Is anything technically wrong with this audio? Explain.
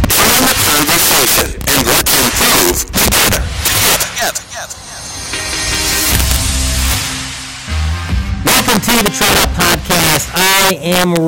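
Yes. Integer overflow runs through the whole clip. The signal is driven about 13 dB past full scale, and instead of being limited, every sample beyond the largest integer value wraps around to the opposite extreme. Roughly 7 percent of samples cross that limit, so each loud peak jumps across the full range in a single step. The result is violent, harsh cracks on the louder parts of the sound, far sharper and more abrupt than ordinary clipping.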